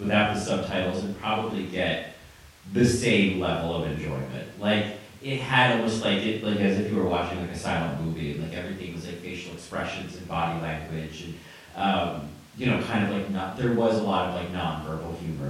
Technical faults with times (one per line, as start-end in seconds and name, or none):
none